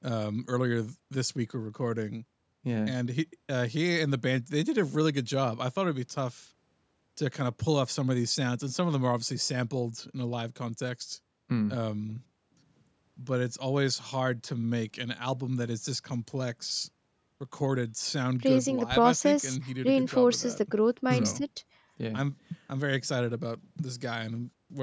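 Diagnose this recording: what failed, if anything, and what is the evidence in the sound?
Nothing stood out on listening to this speech recording; the only processing audible is the ordinary call microphone chain, with its top end stopping around 8 kHz.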